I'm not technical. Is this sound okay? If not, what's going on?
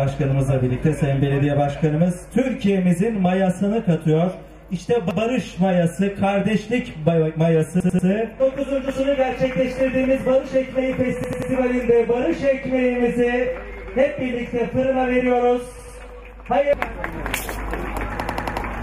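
No, there's a repeated buffer problem: new audio arrived late, so the player replayed its last chunk of about 93 ms. You'll hear little stutters at 5.11, 7.80, 11.24, 15.79 and 18.20 s, repeating between two and five times, though nothing seems to go missing.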